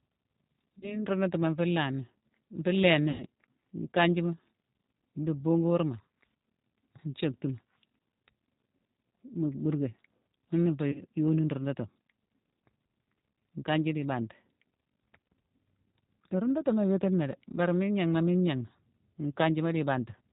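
Speech that sounds rough, slightly synthetic and muffled, with nothing above 4 kHz, which fits the G.729 codec at 8 kbit/s: each 10 ms frame is rebuilt from a vocal tract filter, a pitch predictor and a few pulses, so the damage is plainly audible throughout. At 0.79 to 1.04 s, 3.11 to 3.23 s and 10.92 to 11.02 s the sound stretches into a buzzy tone or coloured noise that fades, and stays weak or distorted afterward. This is VoIP packet loss concealed by the speech codec. About 30 ms, 90 ms and 30 ms of audio were lost, and the decoder extrapolated from its last frame, with the effect lingering as later frames rebuilt.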